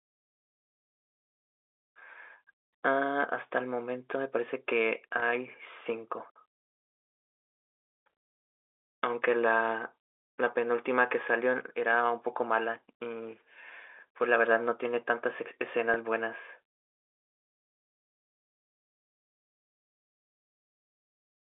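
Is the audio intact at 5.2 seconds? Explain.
No. At 5.20 to 5.22 s there is a brief packet loss with pitch repetition. About 20 ms of audio goes missing, which fits a single lost packet. The receiver fills the hole by repeating the last pitch period it received, rather than leaving silence. Because the gap is so short, the repair sounds like a slightly held, buzzy tone for an instant. The speech then resumes.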